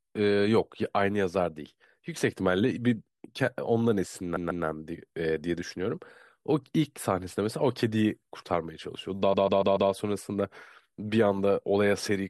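Speech with repeated frames: a 144 ms chunk stutters twice extra at 4.36 to 4.65 s, then four extra times at 9.33 to 9.90 s, which fits a resent six-frame block.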